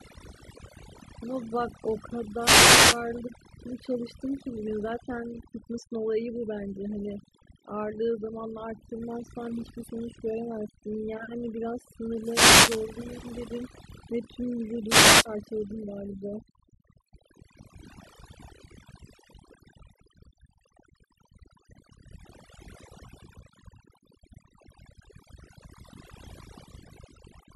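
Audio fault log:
Throughout: overdone noise removal. The pauses fall to near silence dotted with twinkling specks. A noise reduction stage set far too aggressively is pulling individual frequency bands down or off whenever they sit close to its noise estimate. Quieter parts of the speech fall below that threshold and vanish with the noise, and the few stray bands that survive in the gaps leave the glittering residue.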